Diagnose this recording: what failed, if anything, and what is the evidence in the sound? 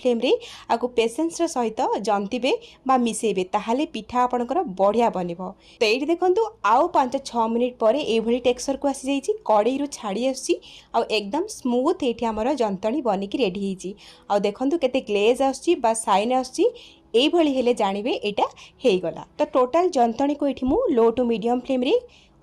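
Nothing failed at any stage of the chain, and there is no fault evidence anywhere in the sound to trace to a mechanism.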